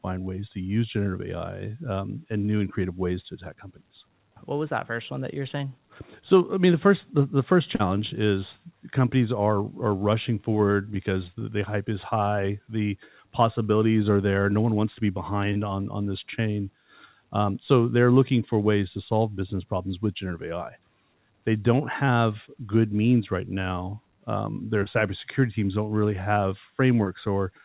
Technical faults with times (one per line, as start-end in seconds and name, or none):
5.58-5.61 short concealed packet loss
7.75-7.81 short concealed packet loss
11.39-11.43 short concealed packet loss
15.53-15.57 short concealed packet loss
22.05-22.09 short concealed packet loss
24.83-24.88 short concealed packet loss
27.04-27.08 short concealed packet loss